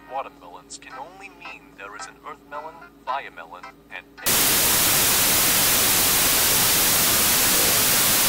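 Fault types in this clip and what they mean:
Wrong sample width: from 4.26 s to the end the audio turns to loud noise with the original buried inside, playing at half speed and an octave low, which fits 32-bit samples read as 16-bit.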